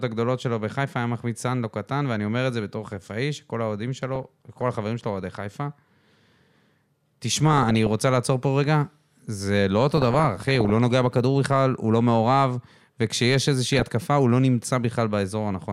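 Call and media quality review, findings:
DAB burbling over the speech at 4.05–4.61, 7.36–7.93, 9.97–10.70 and 13.65–13.91 s: short noisy blips and level jumps in single sub-bands. Weak reception, bit errors around half a percent slipping past error correction and corrupting MP2 sub-band samples and scale factors frame by frame.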